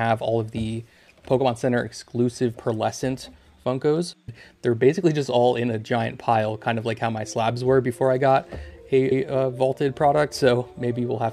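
The audio has one glitch from repeated frames. At 9.11 s, a short stretch running to 9.24 s plays and then immediately plays again, giving a quick stutter. The repeated block is about 131 ms long and comes back once, which points to a run of roughly five compressed frames being written or sent twice. The decoder just plays what it receives, so it plays that chunk a second time, and the clip ends up about 131 ms longer.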